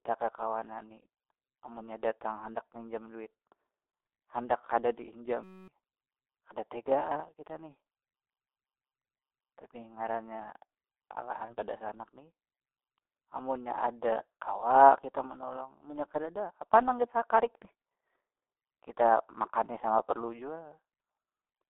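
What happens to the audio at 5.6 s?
At 5.6 s the audio is inside a system hang loop running from 5.44 to 5.68 s. The driver stalled while the hardware kept replaying one 5.33 ms slice, which fits a 256-sample buffer, so it repeats 46 times at 188 Hz and is heard as a steady buzz. About a third of a second of real audio is lost behind it.

The G.723.1 codec damage present across the clip also applies here. It runs at 6.3 kbit/s with a 250 Hz to 3.6 kHz passband and models the voice coarsely in long frames, so the speech sounds muffled and hoarse and its consonants are smeared.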